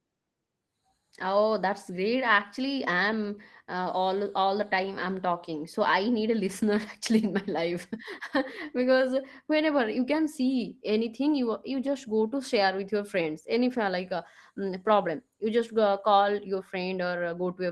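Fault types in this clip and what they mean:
No technical faults can be heard in this recording.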